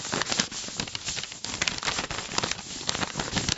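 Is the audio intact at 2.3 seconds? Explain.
Yes, the audio is intact at 2.3 seconds, with no dropout, click, distortion or other fault at that moment.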